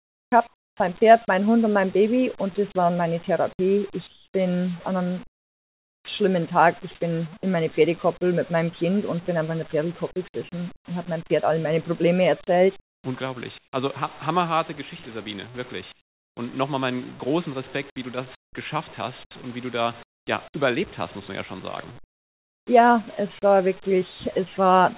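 From the start to 0.8 s, the background is a steady, featureless hiss with none of the real room's detail. This is likely comfort noise in place of the background: the sender stops transmitting during a pause, and the receiver fills about 650 ms with synthetic noise roughly matched to the background. The same flat texture returns from 4.07 to 6.08 s (about 1080 ms replaced), from 10.76 to 13.73 s (about 510 ms), and from 15.92 to 22.67 s (about 1500 ms).

At 0.78 s, the sound that follows that first stretch begins abruptly, without its soft attack. This is likely the onset clipped by the voice detector. The detector was probably slow to register that sound had resumed, so the first 20 ms were never sent, and the receiver kept playing synthetic noise until transmission restarted.

Throughout, nothing reaches above 4 kHz, which points to a narrowband call codec such as G.711 A-law at 64 kbps on the call path.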